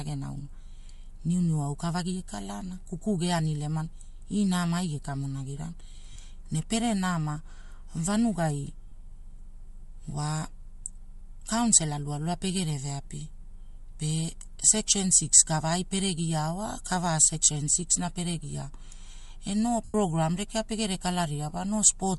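The whole clip has a grainy, breathy edge on the speech, with the top end sounding thin and noise-filled. That's most likely Bluetooth LC3 compression. The codec throws away much of the upper spectrum and fills the gap with noise, and the damage here is plainly audible. The character fits LE Audio's short 7.5 ms frames at something around 48 kbps.

There are also lost LE Audio frames. Short gaps at about 6.13 to 6.16 s and 8.89 to 8.92 s each last about 30 ms, which fits four frames going missing. The decoder papers over them by reusing the last spectrum with random signs, so instead of a clean dropout you hear a brief noisy smear. The longer loss, from 19.85 to 19.94 s (about 98 ms), smears first and then fades away as the concealment gives up.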